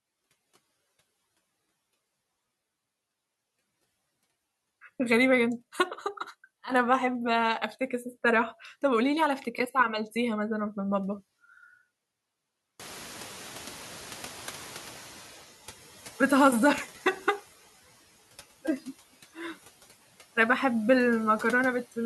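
At 12.79 s the noise suppressor is caught catching up as the room noise jumps by about 22 dB at roughly 13.0 s, settling about 20 dB below the speech. Its outdated noise estimate lets the louder background through with little reduction, then adapts over 2.66 s until, by 15.45 s, the noise sinks about 8 dB.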